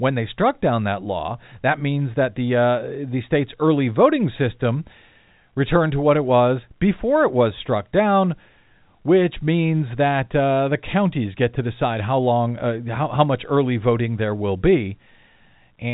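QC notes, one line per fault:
Nothing stood out on listening to this telephone-band speech, which carries the narrow G.711 telephone coding sound with nothing above about 3.8 kHz.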